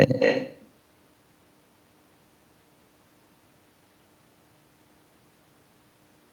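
Right through the speech there's echo with no canceller: the far end's speaker feeds its mic, so each phrase comes back roughly a third of a second later, only about 3 dB quieter.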